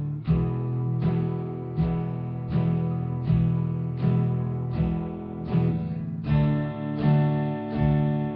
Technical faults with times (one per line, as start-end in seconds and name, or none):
none